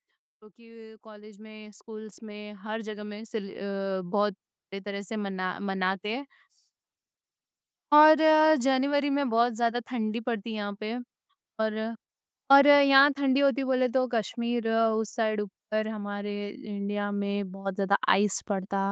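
From 0.55 to 4.22 s, automatic gain rising lifts the level by about 18 dB. The control judged the input too quiet. Speech and background swell together.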